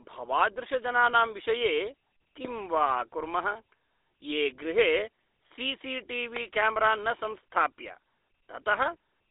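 A speech recording carried over a GSM full-rate codec throughout, with the damage plainly audible. The voice has the gritty, buzzy roughness of this coder, which rebuilds speech from a vocal-tract filter excited by a sparse, regularly spaced pulse train, so fine detail in the excitation is lost. The line passes roughly 300 Hz to 3.7 kHz and nothing above 3.8 kHz, giving a narrow, telephone-like sound consistent with a 13 kbps stream. Two loud pops sit on top of the speech, one from 2.45 to 2.47 s and another from 6.36 to 6.39 s. Each is a single sharp transient, roughly 15 dB above the speech level and about 23 ms long, with the talking continuing underneath. A pulse like this is most likely a voltage spike from a connector, switch or static discharge, shaped briefly by the circuitry that follows it.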